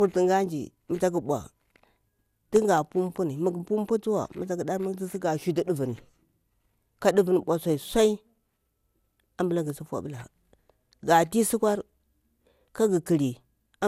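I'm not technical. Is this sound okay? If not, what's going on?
No. The speech has generation loss from start to finish. It sounds swirly and hollow, and the starts of sounds are blurred rather than crisp. Nothing is present above 16.6 kHz, so the top end is missing. The likely cause is that the recording was saved in a compressed format, MP2, and then reopened and saved again around ten times. Each save threw away slightly different detail, and those losses built up.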